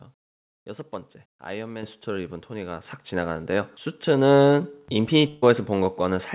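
A speech recording, band-limited to nothing above 4 kHz in a way that points to a G.711 mu-law call codec at 64 kbps. Voice and background jump louder together at 1.83 s (about 8 dB) and 2.85 s (about 5 dB), the microphone volume stepped up by the call software's automatic input gain. From 5.28 to 5.44 s the last sound is carried on and fades before resuming about 140 ms further on, a burst of packet loss concealed by extending the last audio.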